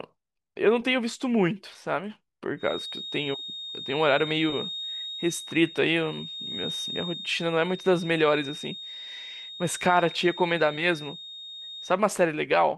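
From 2.56 s to 12.00 s a feedback whistle sits behind the speech: a thin, steady tone at 3.7 kHz, roughly 15 dB below the voice, swelling and fading slowly in level but never building up. The likely cause is a loudspeaker-to-microphone loop held right at the edge of feedback, so one frequency keeps ringing. On a spectrogram it shows as a single unbroken horizontal line at 3.7 kHz, crossing speech and pauses alike.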